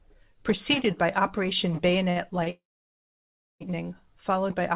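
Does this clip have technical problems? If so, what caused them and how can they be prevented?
Yes. Two short stalls from a late packet occur, at 2.10 to 2.18 s and at 2.44 to 2.48 s. Each time, the next packet had not arrived when it was due, the jitter buffer ran dry, and the receiver stretched the last sound until the packet arrived, about 57 ms the first time and 24 ms the second. Nothing is lost, but the held sound carries a slight buzz or dip. On a spectrogram, the harmonics run flat and unchanging for those few tens of milliseconds. In the waveform, a short stretch repeats one cycle shape instead of evolving. Letting the jitter buffer grow adaptively, with a little more headroom, would absorb delays of this size.

A call audio freeze runs from 2.50 to 3.62 s, right after the second stall. The packets were likely held up in transit. The receiver first continued the last sound as a fading buzz or hiss, then went silent for about one second, and when the packets finally arrived the audio resumed where it had stopped. 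About 1.1 s of gap was inserted and nothing went missing. On a spectrogram, a smeared, decaying band gives way to a blank column across all frequencies. The waveform shows a brief tapering tail and then a flat line. A steadier network route, with less congested Wi-Fi or prioritised traffic, would prevent holdups this long.

The call path's band ends at 4 kHz, which fits G.711 telephone coding.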